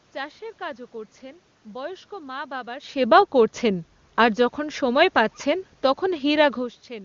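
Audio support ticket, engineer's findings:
No system faults found on this speech recording.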